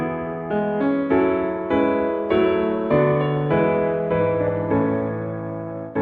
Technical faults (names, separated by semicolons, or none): none